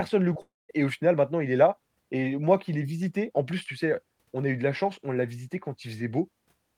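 At 0.33 to 0.37 s, a short concealed packet loss: about 20 ms of speech failed to reach the decoder in time, so the receiver extended the preceding sound across the gap and blended back in. It is heard as a brief smear or wobble in the speech.

From 0.41 to 0.71 s comes a long network dropout, likely a stall in delivery that left about 280 ms missing. The last sound is stretched into a fading buzz or hiss that gives way to about 0.2 s of silence before the speech resumes without the lost portion.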